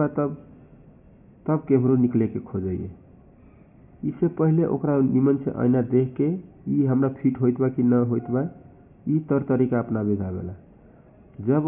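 No technical faults are audible anywhere in the recording.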